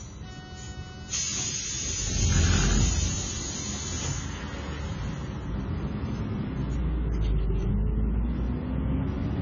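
From start to finish the sound is dull and smeared, with nothing above 7 kHz, so the top of the spectrum is missing. Sustained parts warble and sibilant or noisy parts turn fizzy. The likely cause is heavy AAC compression with AAC-LC at a very low bitrate, which fits roughly 16 kbps. With so few bits to spend, the encoder cuts off the high band and quantises the remaining frequency lines coarsely, leaving gaps or filling bands with substitute noise.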